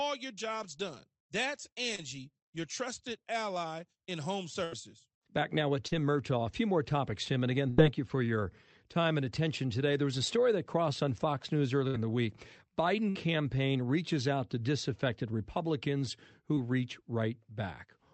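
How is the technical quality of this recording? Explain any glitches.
The speech comes through a call path with audible packet-loss glitches. Its top end stops near 8 kHz, which fits a wideband call codec such as Opus.

Short concealed packet loss occurs at 1.95–2.00 s, just before "your trusted ally in", and again at 5.88–5.93 s. About 20 and 40 ms of audio went missing. The receiver filled about 28 and 37 ms by extending the preceding sound and then blending back. Each gap is heard as a brief smear or wobble rather than a held tone.

Bursts of packet loss occur at 4.64–4.74 s, right after "trusted ally in home", and at 7.69–7.80 s, 11.88–11.96 s and 13.10–13.17 s, the last just before "campaign reaches out to". About 60 to 80 ms went missing each time. Concealment stretched the last sound for 57–83 ms, fading it out. Unlike the short losses, each one is heard as a held buzz or fading hiss, and the speech then resumes with a chunk skipped.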